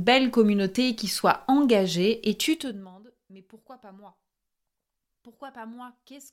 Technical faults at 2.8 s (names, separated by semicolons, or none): zipper noise